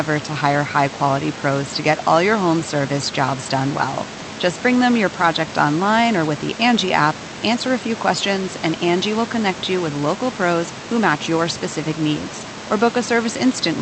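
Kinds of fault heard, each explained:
No system faults heard; the room's background noise sits about 15 dB below the speech and belongs to the recording.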